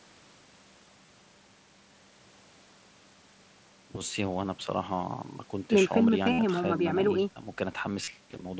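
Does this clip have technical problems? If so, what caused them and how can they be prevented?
Yes. Brief buzzy held tones, each ending in a slight warble, occur at 1.06–1.09 s, 6.33–6.39 s (the longest, 60 ms) and 8.04–8.08 s. This is concealed Bluetooth headset packet loss: packets from the headset were dropped, and the phone filled each gap by repeating a recent stretch of waveform. Keeping the phone close to the headset, with nothing blocking the path between them and less nearby 2.4 GHz interference, prevents it.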